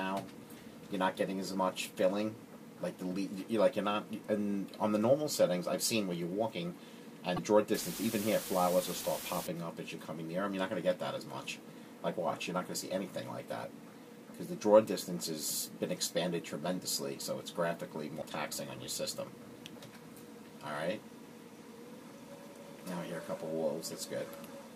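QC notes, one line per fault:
7.36–7.39 s and 18.21–18.23 s: broken MP3 bit reservoir. Each is a brief glitch where the audio jumps ahead. Likely, cut frames left the next frame reading the wrong borrowed data.
7.74–9.47 s: low bit depth with dither. The audio drops to 6 bits. Dither turns the rounding error into steady, even hiss, nearly as loud as the signal, without distortion.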